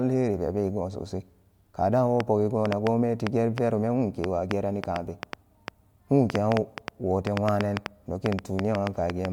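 From 2.20 s to 9.26 s a train of clicks runs over the speech, around 30 sharp ticks arriving at roughly 4.5 per second but at an uneven pace. Each click stands well above the speech and continues through the pauses. The likely cause is interference from nearby equipment or a faulty connection or power supply injecting repeated pulses. Unlike crackle, whose pops vary in size and shape, these clicks all sound alike, a near-identical tick recurring throughout.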